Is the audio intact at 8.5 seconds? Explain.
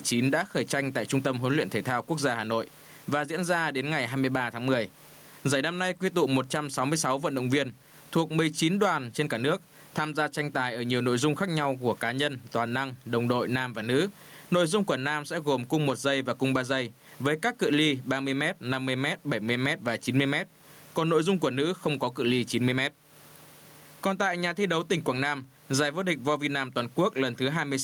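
No. Gain pumping runs through the whole clip, including 8.5 s: gain set far too high, likely clamped by a fast limiter, swings around 15 dB, with the room noise about 40 dB below speech. The waveform looks flattened, with the noise floor rising between phrases.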